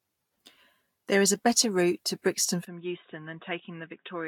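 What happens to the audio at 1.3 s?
At 1.3 s you're hearing the generation loss that runs through the whole speech clip: swirly, hollow and smeared, likely from a few Vorbis re-encodes near 55 kbit/s, with nothing above 18.9 kHz.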